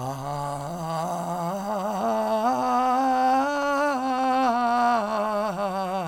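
Nothing in this music stood out as a technical problem on listening.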